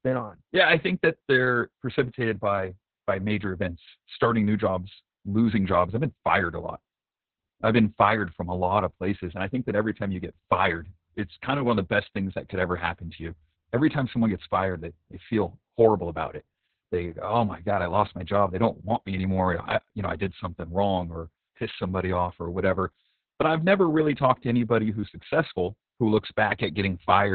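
From start to finish, the speech carries Opus voice compression. It runs in the SILK linear-prediction mode at narrowband, so nothing is left above 4.4 kHz. The voice sounds muffled and boxy. The coder models each stretch of speech with a crude excitation signal, and the damage is heavy here. Voices come out hoarse and faintly robotic. The degree of loss fits a very low bitrate, around 6 kbps, with long 60 ms frames.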